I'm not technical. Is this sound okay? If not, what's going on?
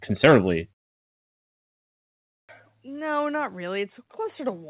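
No. At 2.21 s, after a silence of about 1.5 s, the speech restarts abruptly with its first 0.28 s missing. This is a clipped start after a pause. The playback device dozed off and woke too late. Unlike muted pauses, here actual speech is lost.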